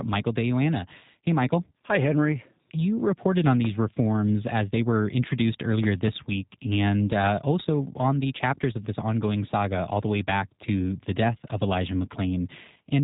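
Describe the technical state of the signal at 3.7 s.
A single loud pop sits at 3.65 to 3.67 s, between "you reported on" and "reforms as they were". It peaks about 10 dB above the speech. A sudden voltage step, likely from a plug, switch or static, caused it. The speech continues underneath. The G.729 codec damage also runs through this moment. The speech is rebuilt from a filter, pitch and pulse model, and it sounds rough and synthetic. Nothing passes above 3.8 kHz, which fits 8 kbit/s G.729A.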